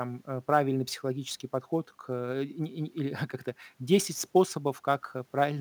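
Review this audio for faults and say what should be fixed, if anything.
Sample clock jitter runs through the whole speech clip. The converter clock wanders by a few microseconds, so each sample lands slightly early or late. That timing error scales with waveform slope, producing roughness around 30 dB below the signal. Unlike a steady noise floor, it swells on loud, bright syllables and disappears in pauses. Fix it by clocking the converter from a clean, low-jitter reference with good power-supply isolation.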